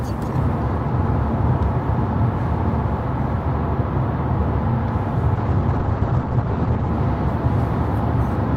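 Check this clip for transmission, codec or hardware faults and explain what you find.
One fault shows up, a call bitrate drop from 5.37 to 6.97 s. The bandwidth estimate collapsed, so the encoder went much coarser, which fits a fall from about 40 kbps to around 10. The top end gets chopped from 20 kHz to 8 kHz, leaving the sound muffled and watery until it recovers.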